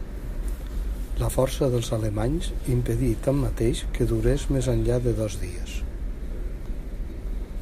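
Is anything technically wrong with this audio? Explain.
No, nothing in this speech recording stood out as technically wrong on listening.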